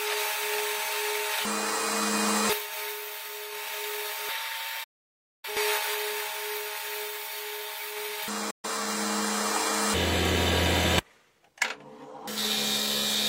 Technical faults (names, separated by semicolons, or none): digital broadcast dropout